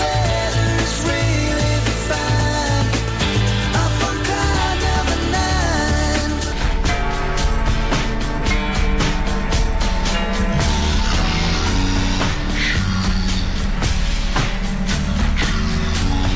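Wrong sample rate from 6.52 s to the end at 16.36 s: the audio drops to half speed, and its pitch falls a full octave, 12 semitones. Playback is running at half the rate the material was captured at, with no conversion between them, which fits audio made at 32 kHz being played at 16 kHz. Because speed and pitch are tied to that single ratio, everything becomes low, slow and stretched.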